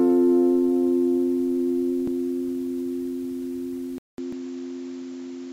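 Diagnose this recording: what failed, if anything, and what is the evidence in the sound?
Two short skips at 2.08 s and 4.33 s point to the buffer stage, with audio missing between chunks. At each point roughly 300 ms of sound is gone and the two sides butt together with no silence, so the audio jumps forward abruptly. The spacing fits a recorder handling the stream in 2.5 s chunks and likely dropping a piece of audio each time it closes one chunk and opens the next.

At 3.98 s the input switched to a poorer device, which places the fault in the driver and input routing. A silence of about 200 ms marks the switch. From then to the end, nothing reaches above 7.6 kHz, so the sound turns duller. A new noise floor sits roughly 45 dB below the signal, while the overall level stays about the same. This is likely the system changing microphones or moving to a narrower headset profile mid-recording.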